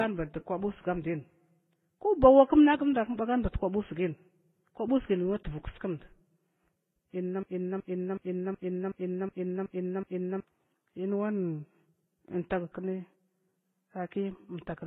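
From start to finish the speech has nothing above 3.8 kHz, with a hard ceiling on the spectrogram, and carries a mix of different codec artefacts heard together that don't belong to any single codec. This is likely transcoding between lossy codecs, with the audio passing through something like low-rate AAC, then HE-AAC, then Vorbis. Each stage re-encoded the previous stage's damage, stacking distinct artefact textures while the lowest bandwidth limit in the chain held.

From 7.43 to 10.40 s a system hang loop takes over. A single 0.37 s slice of speech repeats exactly eight times at about 2.69 Hz, which fits a 16384-sample buffer being replayed while the system stalled. It sounds like a rhythmic, machine-gun stutter rather than a buzz. On the waveform the same block appears as identical copies side by side, and the spectrogram shows a repeating tiled pattern. Roughly three seconds of real audio are missing.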